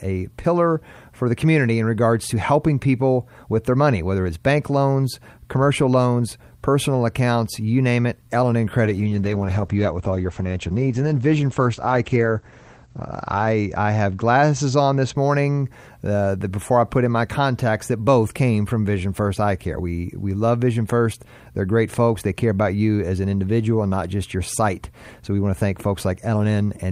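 From 8.86 to 15.22 s, a call bitrate drop leaves the speech muffled and rough. Audio bandwidth falls from 20 kHz to 8 kHz, pointing to an encoder squeezed from about 48 to 11 kbps.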